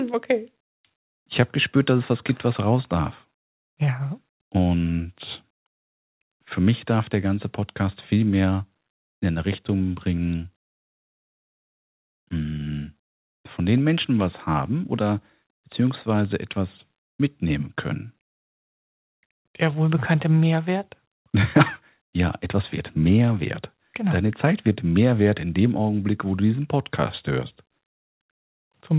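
No technical faults are audible.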